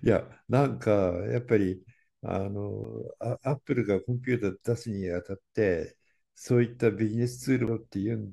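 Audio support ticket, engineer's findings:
Short tick with an abrupt jump in the speech at 2.84 s and 7.67 s, each a silence of only a few milliseconds. CD skip: a knock or disc flaw throws the laser onto another spiral turn, and playback resumes from a displaced point.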